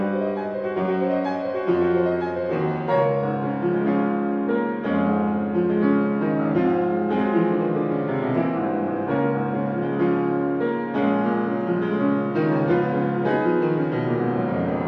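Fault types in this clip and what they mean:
Bluetooth SBC bit pool drop: twice the treble dulls and gritty grain rises as upper sub-bands starve of bits; unlike a dropout, sound never stops.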